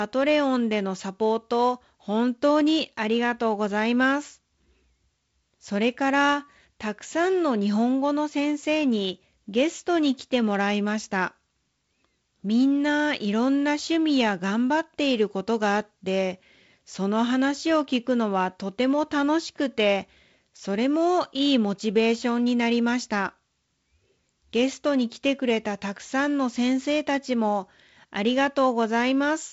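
Nothing here counts as a fault: the speech simply comes through a G.722 wideband telephone path, with content stopping at about 7.7 kHz and the light coding roughness that fits the 48 kbit/s mode.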